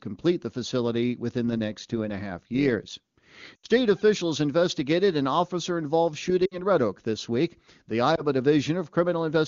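From 1.47 to 2.98 s the speech carries overlap-add ripple: frames were rejoined with windows whose overlap doesn't sum to constant gain, so level swings about 6 dB once per frame, near 100 Hz. Unlike a slow tremolo, this steady ripple is heard as a metallic buzz with extra tones around the voice.

Lost AMR speech frames then cause short gaps at 3.55 to 3.66 s (80 ms, which fits four 20 ms frames), 6.46 to 6.61 s (60 ms), and 8.15 to 8.22 s (20 ms). Each time, the decoder reuses the last good settings with falling gain: the longer runs drop to near silence within two frames and the single lost frame gives a brief dip, before the voice returns briefly weak or rough, rather than cutting cleanly to silence as a dropout would.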